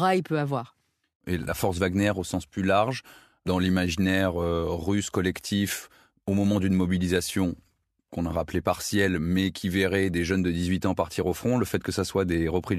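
Speech recording with no audible technical faults.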